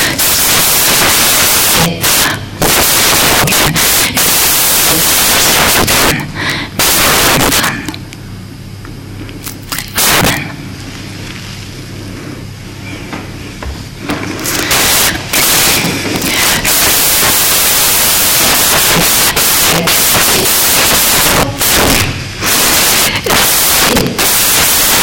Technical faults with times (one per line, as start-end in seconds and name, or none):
0.00-25.03 samples built from the wrong bytes